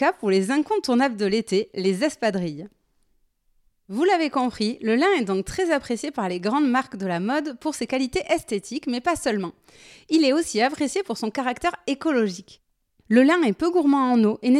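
Nothing in the speech stood out as a technical problem on listening.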